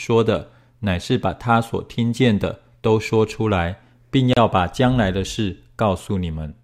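A speech clip with a gap between stream segments at 4.33 s, just after "说出来并" and before "把将来的": a hard-edged silence of about 32 ms where segment timestamps fail to meet at a 4-second boundary. Unlike a dropout, nothing is missing; the sound simply resumes late.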